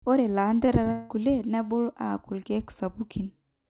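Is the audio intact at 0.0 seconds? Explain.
Yes, the speech is intact at 0.0 seconds, carrying only the narrow telephone-band sound of a G.711 call path with nothing above 4 kHz.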